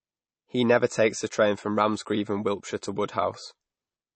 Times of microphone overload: none

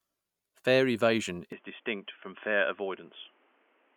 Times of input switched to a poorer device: 1.52-3.96

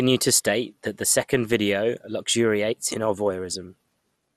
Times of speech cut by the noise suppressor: none

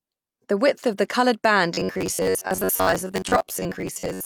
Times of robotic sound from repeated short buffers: 1.74-4.26

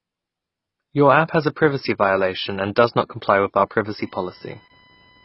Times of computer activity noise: 3.58-5.25

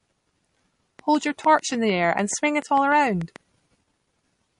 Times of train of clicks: 0.99-3.37

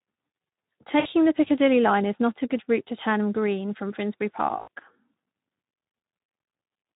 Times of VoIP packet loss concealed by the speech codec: 0.99-1.07, 4.59-4.79

